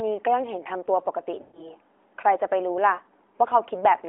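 At 1.42 to 1.71 s and again at 2.94 to 3.00 s, lost AMR speech frames: corrupted frames failed their checks, so the decoder repeated the last good pitch and vocal tract settings at falling gain. The longer gap smears and fades toward silence. The shorter one is a brief warbling dip.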